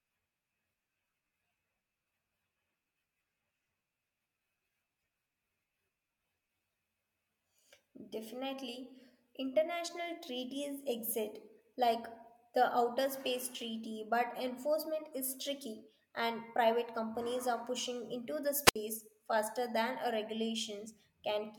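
At 18.64–18.76 s, a wireless microphone squelch dropout: the fading radio link brings a broadband hiss smear, then the receiver mutes for 68 ms, leaving a flat, blank gap before speech returns.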